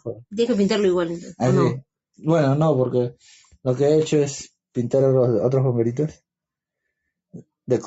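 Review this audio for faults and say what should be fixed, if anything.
No faults heard; nothing here needs fixing.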